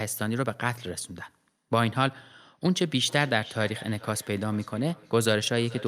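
Speech, and from 2.82 s to the end there's feedback echo between two devices: the sound loops back roughly every 400 ms, peaking about 19 dB below the talker.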